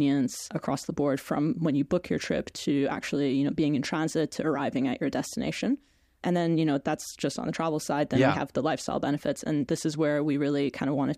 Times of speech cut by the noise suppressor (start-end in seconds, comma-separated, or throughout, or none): none